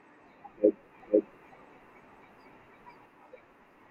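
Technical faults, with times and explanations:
1.0 to 3.06 s, doubled audio track: a dry copy of the speech trails about half a second behind, equally loud. It starts and stops abruptly. Likely a second, slower capture path.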